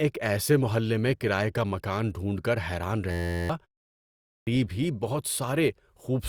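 Just after "مکان ڈھونڈ کر حیران", from 3.11 to 3.50 s, you get a system hang loop. The machine or its driver stalled while the sound hardware kept replaying the same tiny slice of its ring buffer, an 11.61 ms chunk, which fits a 512-sample buffer. Because that slice is so short, the thirty-odd repeats fuse into a steady buzz at about 86.1 Hz rather than a stutter, and roughly 0.4 s of the real audio disappears under it.

A bit later, after a 0.35 s pause, there's a clipped start. The output device dozed off during that short silence and took a while to wake up and lock again, so the first 0.54 s of sound, from 3.93 to 4.47 s, just isn't there. The speech then jumps in abruptly out of nothing at "ہی بہت", with its opening sounds missing.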